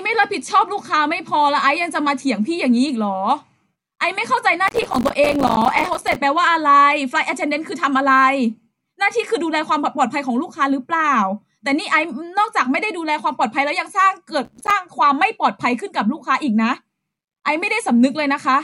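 Speech with processor overload crackle from 4.68 to 6.16 s and again from 14.45 to 14.71 s. Many small buffers, around 5 ms each, miss their deadline and drop to silence, leaving dense hard-edged gaps in the waveform and broadband vertical streaks on the spectrogram.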